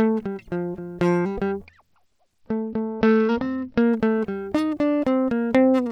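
A Bluetooth SBC bit pool drop hits this music clip from 1.66 to 3.82 s: the treble dulls and gritty noise rises as the link starves the encoder, which fits the bit pool falling from 31 to 9, around 72 kbps, leaving upper sub-bands empty and coarsely quantised.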